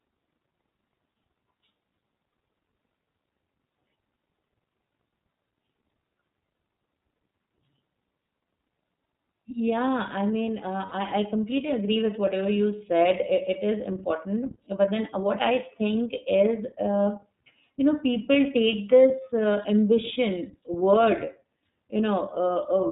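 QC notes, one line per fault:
Throughout: iLBC codec. The whole clip is band-limited at 4 kHz, so sibilants and consonant detail sound dull and boxy. The speech is clear but plainly rough and slightly synthetic, because the codec rebuilds the excitation from a compact model instead of the waveform itself. It codes each frame independently, and the texture fits iLBC's 30 ms frame mode at about 13.33 kbps, where this coarse, buzzy grain is easy to hear.
10.86 to 10.93 s: lost iLBC frames. Between "I mean" and "I I completely agree", a short stretch of about 60 ms is replaced by a held, faintly buzzy vowel-like tone. With no data arriving, the decoder repeats the last pitch cycle blended with noise to fill the hole. The length points to two consecutive 30 ms frames going missing. Because each iLBC frame decodes independently, the speech snaps back cleanly as soon as packets arrive again.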